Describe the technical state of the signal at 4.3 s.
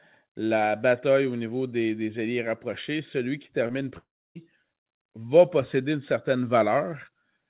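At 4.3 s the signal is inside a gap running from 3.98 to 4.37 s, right after "rapprochés celui qui termine", most likely a long network dropout. The last sound is stretched into a fading buzz, and by this point only silence remains. Roughly 0.38 s of speech never arrives, and the audio resumes without it. Around the gap, the G.711 call path's band limit of 4 kHz is audible.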